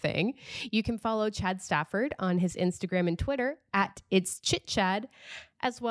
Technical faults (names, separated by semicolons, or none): none